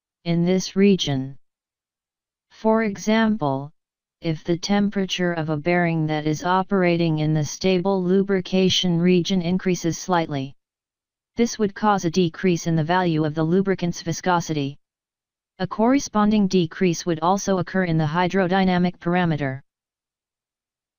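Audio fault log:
0.00–9.26 s, time-stretched section: the sound runs at 0.72 times its normal pace while its pitch holds steady, so the opening drags until the pace abruptly returns. The likely cause is software lengthening this part to fill a set duration by repeating short pieces rather than lowering the pitch.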